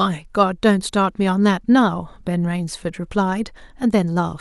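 Nothing in this speech recording stood out as a technical problem on listening.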